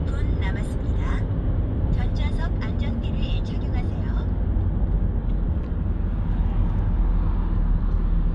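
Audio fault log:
No faults detected in this sound recording.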